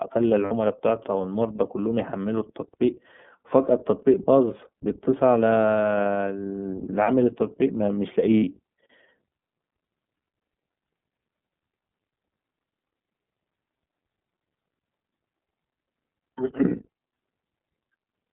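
From the start the speech runs through the iLBC codec. The band is confined to about 150 Hz to 3.6 kHz, so there is no air or sibilant sparkle, and voicing has a plainly audible rough, slightly synthetic grain. That texture fits iLBC at 13.33 kbps with 30 ms frames. It differs from plain telephone band-limiting, which narrows the sound without adding that coarse, buzzy edge.

Lost iLBC frames interrupt the speech at 0.44 s (60 ms), 5.62 s (30 ms) and 8.38 s (60 ms). Each time, the decoder bridges the missing frames by repeating the last pitch cycle mixed with noise, so the gap sounds like a short held, faintly buzzy vowel rather than silence or a click. Unlike concealment in codecs that depend on earlier frames, the voice sounds normal again almost immediately afterwards.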